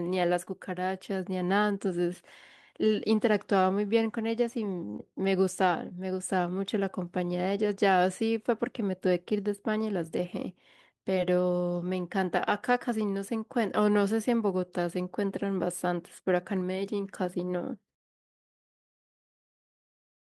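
Short concealed packet loss occurs at 0.45–0.49, 4.97–5.01, 5.89–5.92 and 11.14–11.18 s. Each time, 20 ms went missing. The receiver continued the preceding sound, leaving a brief smear.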